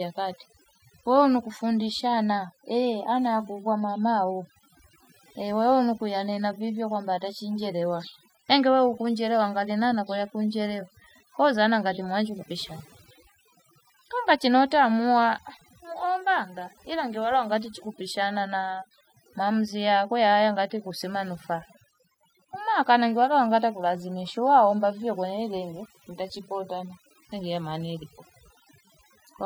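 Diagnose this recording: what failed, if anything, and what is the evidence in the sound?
Overdone noise removal in the call-processing stage runs through the whole speech clip. The suppressor, set too aggressively, shuts off individual frequency bands near its noise estimate. Gaps between phrases drop to near silence with twinkling specks. A spectrogram shows isolated bright dots on a dark floor and ragged, hollowed harmonics.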